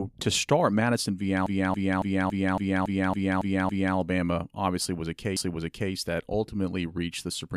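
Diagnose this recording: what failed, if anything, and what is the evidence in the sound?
Repeated frames, at the codec or storage stage. From 1.47 to 3.97 s, a 279 ms block of speech stutters, playing ten times over. From 5.37 to 5.92 s, a 557 ms block plays twice. Compressed frames were duplicated, lengthening the audio by about 3.1 s.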